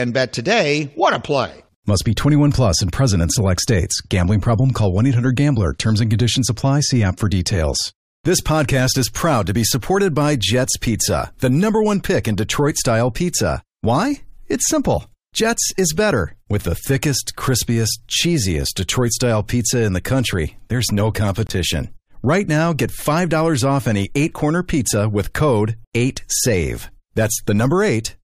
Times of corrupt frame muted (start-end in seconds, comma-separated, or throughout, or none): 21.47-21.50